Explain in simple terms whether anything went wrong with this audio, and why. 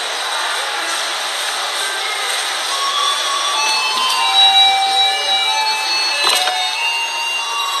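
Nothing is heard above about 12.4 kHz for the whole clip, and the sound has a smeared, warbling texture, most likely from AAC compression. A plain muffling filter would only dull the top end; the fizzy, wobbling artefacts point to heavy lossy encoding.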